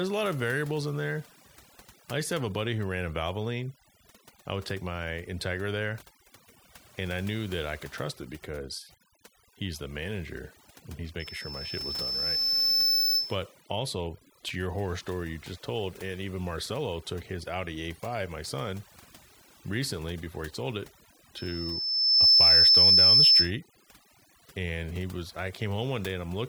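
From start to finish the speech carries overdone noise removal: suppression set too aggressively gates individual frequency bands whenever they sit near the estimated noise floor. The background drops to near silence with twinkling specks. A spectrogram shows isolated bright dots on a black floor.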